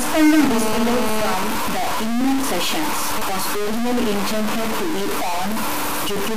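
From start to finish there's a harsh, buzzy grit riding on the speech, and the pauses don't go quiet; they fill with a coarse hiss. That's most likely a stuck bit, one data line frozen at 0 or 1, so roughly half the samples get knocked off by that bit's weight. The noise in the gaps is fairly strong, which points to a high-order bit, with steps somewhere around -15 dBFS.

From 0.39 to 1.34 s a hard, raspy GSM phone buzz sits on top of everything at 217 Hz, thick with harmonics and only about 7 dB below the speech. It's a nearby 2G handset in a call, bursting its transmitter 217 times a second, with the audio circuitry rectifying those radio pulses into sound. It stays steady for that stretch and has nothing to do with what's being said.

Then from 1.43 to 3.21 s, ending just before "was originally intended to", the buzz gives way to GSM signalling bursts: even ticks with a longer 217 Hz buzz twice a second. 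A phone is still in a call, but its user has gone quiet, so it only sends brief groups of bursts. They're much lower this time, something like 25 dB under the speech.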